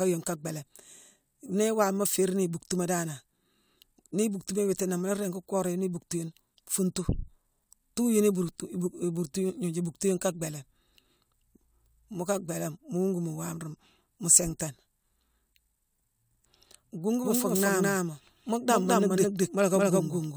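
From 17.24 s onward, a doubled audio track, likely from a slower second path, adds an equal copy about 0.2 s behind, duplicating every waveform burst.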